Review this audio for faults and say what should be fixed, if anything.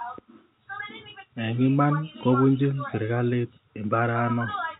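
Nothing stood out on listening to this speech, and there is nothing here that calls for fixing.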